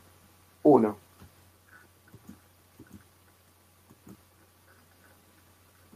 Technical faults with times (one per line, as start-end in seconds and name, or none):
none